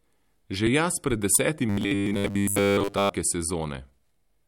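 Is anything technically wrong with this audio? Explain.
Yes. Robotic sound from repeated short buffers, 1.69 to 3.09 s: the speech becomes a rigid metallic buzz at 100 Hz, likely from repeating a 10 ms buffer over most of that stretch.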